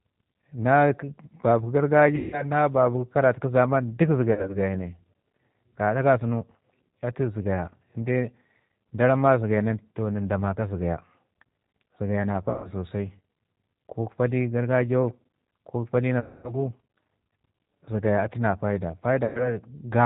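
From start to end, the speech carries G.729 codec damage at 8 kbit/s. Nothing above 4 kHz survives, and the voice sounds rough and slightly synthetic because each 10 ms frame is rebuilt from a vocal tract filter, a pitch predictor and a few pulses. Plain low-pass filtering would dull the sound without that grainy texture inside the voice.

At 2.16 to 2.45 s, 4.33 to 4.59 s, 12.50 to 12.71 s, 16.20 to 16.54 s and 19.25 to 19.58 s, VoIP packet loss concealed by the speech codec stretches the last sound into a fading buzzy tone or coloured noise. Between 100 and 240 ms is lost each time, and at 4.33 s it comes in short scattered bursts. Unlike dropouts to silence, the gap is filled, and the voice stays weak for a moment afterwards.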